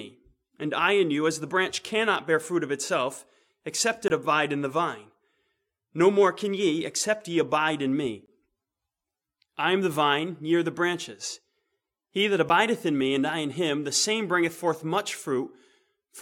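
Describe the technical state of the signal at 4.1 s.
A block of digital silence runs from 4.08 to 4.10 s, a gap of 20 ms. The output was filled with zeros, either because a buffer was not filled in time or because a calculation produced invalid values. The sound stops and resumes abruptly, leaving a short hole.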